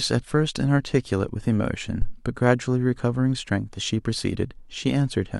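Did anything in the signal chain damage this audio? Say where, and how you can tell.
Yes. At 2.02 s a deep, dull thump cuts into the speech and is gone by 2.18 s, peaking at about -11 dBFS and dying away with a decay of around 37 ms. That low, body-blow quality with a quick tail points to a phantom power thump in the analogue input stage: the supply was switched on or off while the input was live, and the sudden DC step was passed through the coupling capacitors as a low-frequency pulse.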